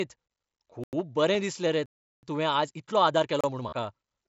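At 0.84 s the speech drops into a block of digital silence for about 93 ms, ending at 0.93 s. The audio cuts to silence and back with no fade, leaving a short hole. The length fits a 4096-sample buffer that the program didn't fill in time.

At 1.34 s, just before "दिसलें रे", there's concealed Bluetooth headset packet loss. About 7.5 ms of the link went missing, roughly one packet's worth. The receiver patched the gap by repeating the closest-matching stretch of the last 20 milliseconds or so, so this one is almost invisible.

Right after "दिसलें रे" comes the big one: digital silence from 1.86 to 2.23 s, about 372 ms. That's a real hole in the speech, cut in and out with no fade, and its length points to a 16384-sample buffer going unfilled.

From 2.53 s to the end the pace suddenly jumps to about 1.35 times normal while the pitch holds steady. It sounds rushed, which is the mark of a time-stretched section. 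This was likely software squeezing the audio to fit a length, dropping short pieces to keep the pitch.

Inside that stretch there's another short silence block at 3.41 to 3.44 s, about 31 ms. Then from 3.69 to 3.73 s comes a longer packet loss of about 37.5 ms. Here the concealment shows: a brief buzzy, held tone, then a small warble as the real signal comes back through the mSBC link.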